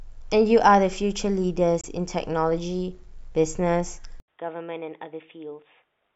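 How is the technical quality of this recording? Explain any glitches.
The recording has two clear glitches, one brief and one that lasts to the end.

From 1.81 to 1.86 s there's a gap of about 23 ms, after which the speech picks up as if it had kept playing. That's most likely a Bluetooth dropout: a packet, probably just one, didn't reach the headphones in time, so the output went silent.

At 4.2 s the sound cuts out for about 80 ms, then returns duller, with nothing above 3.8 kHz, roughly 10 dB quieter, and with faint new background noise well under the speech. That points to the input switching to a poorer device, likely a headset's narrowband call mic taking over mid-recording.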